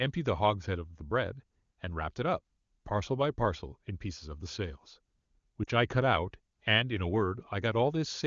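A speech recording carried over an AMR-WB (HD Voice) link, with lost AMR speech frames from 5.64 to 5.70 s. For about 40 ms, which fits two consecutive 20 ms frames, the decoder fills the gap by repeating its last good pitch and vocal-tract settings at falling gain, so the sound briefly smears and dips. On a waveform this shows as a short sag in amplitude. On a spectrogram the harmonics flatten into a held, fading band before speech resumes.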